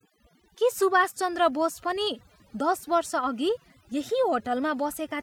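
From start to finish the speech carries overdone noise removal. The denoiser was set too aggressively, so frequency bands close to its noise estimate are pulled down or gated out entirely. Low-level voice detail goes too, leaving the voice over near-silence speckled with twinkling artefacts.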